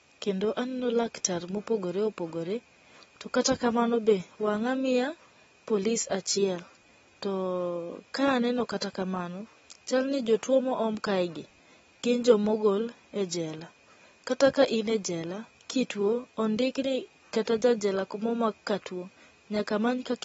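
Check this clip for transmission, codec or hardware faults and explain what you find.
Two codec faults are audible: damage from lossy compression throughout, and one pre-echo.

AAC compression (likely the cause): a low-bitrate transform coder, fitting AAC-LC around 24 kbps, has cut everything above 7.7 kHz and coarsely quantised the rest. The speech sounds dull and smeared, with plainly audible fizzy, warbling texture on sustained sounds and sibilants.

Pre-echo at 8.81 s, just before "kamano chal ni jotuo": a sharp onset fell late in a transform block, so quantisation noise sized for the loud attack spread backward into the quiet gap before it. It is heard as about 11 ms of hiss ahead of a softened attack.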